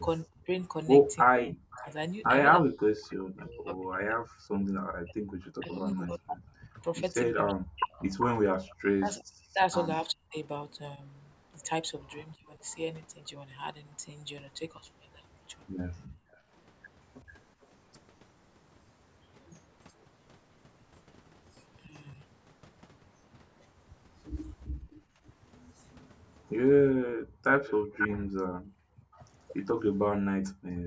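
From 0.24 to 12.58 s the speech repeatedly dips, thins and breaks up, with roughly five seconds affected in total and the deepest drops around 40 dB. This is likely speech suppressed in double talk: with both sides talking at once, the echo canceller pulled the near talker down along with the loudspeaker echo.

Inside that stretch, from 1.44 to 1.94 s, a faint delayed copy of the voice trails about 340 ms behind, roughly 20 dB under the speech. This is likely an echo leak, where the far side's loudspeaker sound got past its canceller and was sent back.

From 4.46 to 4.75 s the room sound drops out for about 0.3 s, by about 40 dB, then returns. This is background gated by the echo canceller, which clamped the microphone while the loudspeaker played.

From 5.42 to 10.36 s a much stronger repeat, nearly as loud as the speech at about 5 dB below, follows 377 ms later. This is likely a sustained echo leak.

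From 16.08 to 16.53 s the background dips by about 27 dB as the canceller gates again. Within that dip, from 16.32 to 16.38 s, a barely audible scrap of echo appears 428 ms late, about 35 dB down, likely leaked past the canceller.

From 21.87 s to the end, the voice again cuts out briefly, about 0.4 s in total and by as much as 40 dB, likely from double-talk suppression.

Between 24.71 and 30.54 s the room sound gates away in pieces totalling about 0.7 s, reaching about 39 dB deep.

From 26.46 to 29.15 s a loud echo, about 5 dB under the speech, trails by 497 ms, likely another leak through the far end's canceller.

Throughout, the call microphone processing leaves nothing above 8 kHz.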